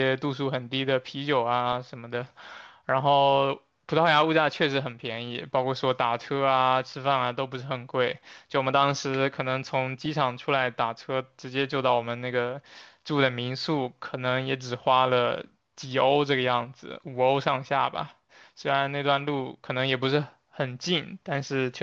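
At 10.05 s there is a brief burst of DAB burbling, where bit errors on the order of a tenth of a percent slipped past error correction. Wrong samples put short blips of noise into single sub-bands, rather than a dropout's silence.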